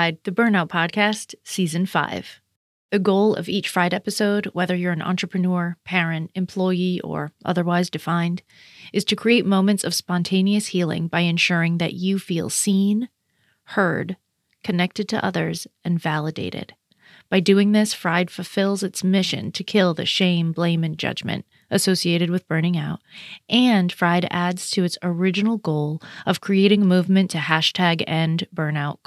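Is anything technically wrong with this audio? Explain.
No, nothing technically wrong turns up anywhere in this speech recording.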